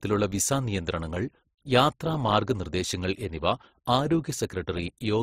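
From start to finish, the speech carries two layers of coding damage at once. Nothing is present above about 19.4 kHz. The artefacts of both codecs are heard together. This is likely transcoding between lossy codecs. The sound points to an MP3 encode near 44 kbit/s, then a second pass through Opus around 32 kbit/s. Opus wastes bits re-encoding the MP3 artefacts and adds its own.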